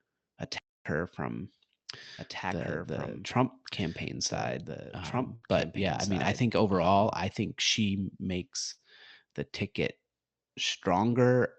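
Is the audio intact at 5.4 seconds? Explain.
No. From 5.35 to 5.44 s there is a burst of packet loss. The last sound is stretched for about 60 ms and faded, then playback jumps ahead, skipping about 60 ms. On a spectrogram this shows as a smeared, fading band followed by a hard seam. Across this moment a doubled audio track also runs, from 2.18 to 7.12 s, starting just before "I think". A dry copy about 5 dB quieter trails about two seconds behind, likely from a second, slower capture path, and appears as overlapping duplicate patterns in the waveform.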